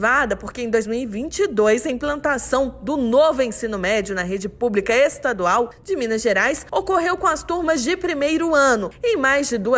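No technical faults are audible anywhere in the recording.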